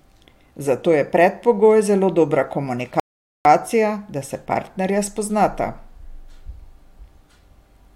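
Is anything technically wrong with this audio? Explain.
Yes. At 3.00 s, right after "je predpogoj zelo dobra", the speech drops abruptly into silence and stays silent until 3.45 s, when it picks up again exactly where it broke off, with nothing skipped. This is a rebuffering stall: playback used up all the downloaded audio and had to wait for more to arrive before continuing. No material is missing, but the pause adds about 0.45 s of dead air.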